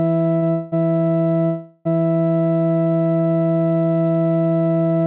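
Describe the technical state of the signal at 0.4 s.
A short stall from a late packet runs from 0.36 to 0.44 s: the jitter buffer emptied, so the receiver held the music for about 61 ms, then resumed with nothing lost.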